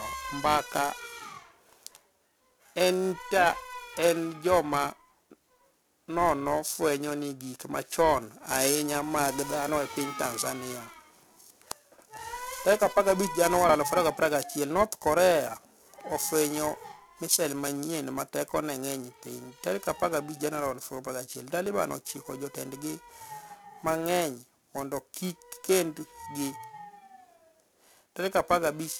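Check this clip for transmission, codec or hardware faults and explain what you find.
Two faults are present: periodic clock jitter throughout the speech, and four short skips from overlap between stream segments.

Periodic clock jitter runs for the whole clip. Interference is modulating the converter's sample clock at around 1 kHz, so each sample is taken slightly early or late in a regular cycle. That timing wobble puts sidebands roughly 1 kHz above and below every component of the speech, most strongly around the higher-frequency content. It gives the voice a rough, metallic edge that disappears whenever the speech pauses.

Overlap between stream segments occurs at 1.72 s, 13.69 s, 21.66 s (just before "chiko jotenidgi") and 25.64 s. The stream is cut into 4 s segments whose timestamps overlap at these joins. The player discards the overlapping span even though that audio was never actually duplicated, so between 5 and 18 milliseconds of real sound vanish and the waveform jumps abruptly. 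Each event is heard as a brief click or tiny skip in the speech.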